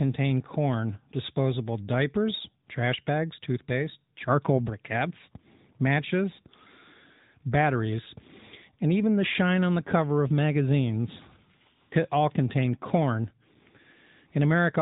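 From start to finish the speech carries the signature of the AMR narrowband mobile codec. Nothing above 3.8 kHz survives, giving the boxed-in telephone sound, but what separates this from a simple low-pass filter is the plainly audible coding damage: a buzzy, synthetic edge where the vocal-tract model and sparse pulse excitation rebuild each 20 ms frame. The degree of roughness fits a mid-rate mode around 10.2 kbps.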